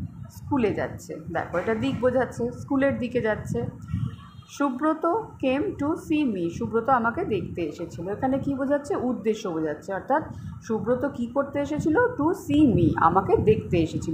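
At 12.54 s the level steps up by about 5 dB and stays there to the end, a sudden gain jump. Sound and background noise rise together in a single sample, which points to a gain change likely applied without any ramp or crossfade.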